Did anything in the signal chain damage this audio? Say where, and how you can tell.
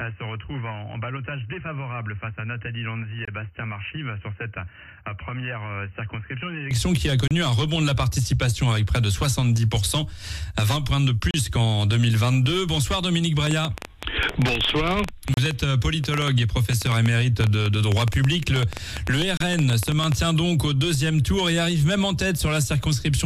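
Yes. An input switched to a poorer device runs from the start to 6.71 s. Nothing reaches above 3 kHz, the level sits about 10 dB lower, and a separate noise floor about 45 dB below the signal is present. At 6.71 s the sound opens up with no silence. This points to the capture stage, likely a narrowband headset profile or a second microphone.

Gaps at joins of encoded pieces fall at 3.25, 7.28, 11.31, 15.34 and 19.37 s. The first is 24 ms and the rest are 32 ms, exactly 4 s apart, each with edges smeared by the codec before the sound resumes. This is a codec-stage fault: 4-second segments were encoded separately and joined without trimming the encoder's start delay and end padding.

A train of clicks runs from 13.47 to 20.13 s. There are roughly 70 similar pulses at about 9.4 per second, irregularly spaced, with peaks about 10 dB above the signal. They tick over the sound and through the pauses. 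This repeated, matching pulse shape suggests interference in the analogue wiring or a faulty connection or power supply.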